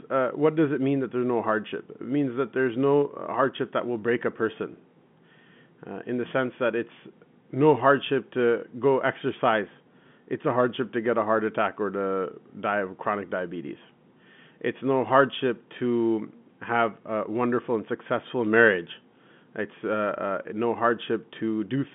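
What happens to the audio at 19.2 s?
At 19.2 s the speech continues intact, carried within the narrow telephone band of the G.711 line, with no fault at that moment.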